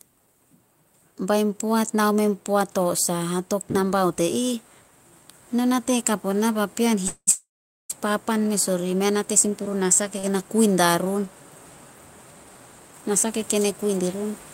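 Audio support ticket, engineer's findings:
Call audio freeze, 7.07–7.29 s and 7.31–7.92 s, after "onah papean", before "papan mes orih": last sound continued as fading buzz or hiss, roughly 50 ms then 440 ms near-silent. About 0.8 s of gap inserted, nothing lost. Likely packets held up in transit, jitter buffer underrun.

Jitter buffer slow-down, 9.45–10.01 s: playout at 90% speed, pitch unchanged, sounds drawn out. About 60 ms added by repeating pitch periods to rebuild buffer reserve.

Short stall from a late packet, 10.19–10.25 s: sound held about 42 ms too long with slight buzz or dip. Buffer ran dry waiting for one packet, then playback resumed where it stopped, nothing missing.

Jitter buffer speed-up, 13.03–14.15 s: playout at 108% speed, pitch unchanged, sounds hurried. Roughly 100 ms trimmed in short pitch-period cuts to drain excess buffered delay.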